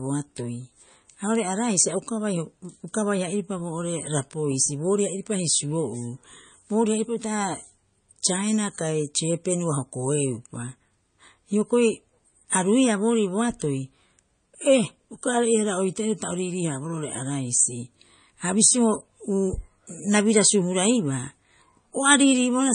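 MP3 compression throughout, likely a roughly 32 kbps encode: treble stops at 9.4 kHz and starved frequency lines flicker between frames, making speech watery, swirly.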